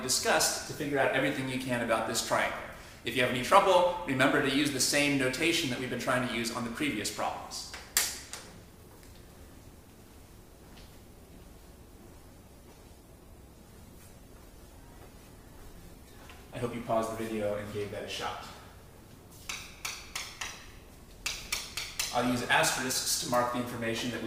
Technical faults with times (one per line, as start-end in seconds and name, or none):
12.13-16.13 adaptive stream at a lower bitrate